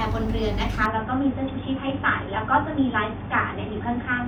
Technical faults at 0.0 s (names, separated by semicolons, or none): none